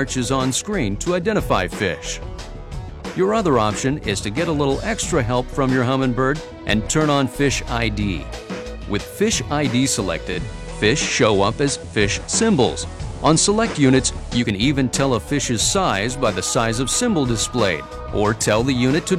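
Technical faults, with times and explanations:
10.29 to 14.51 s, digital radio blending to analogue: the receiver lost its digital signal and cross-faded over 128 ms to the station's FM broadcast, then back. While on FM the level shifts by about 2 dB and hiss sits roughly 30 dB below the signal.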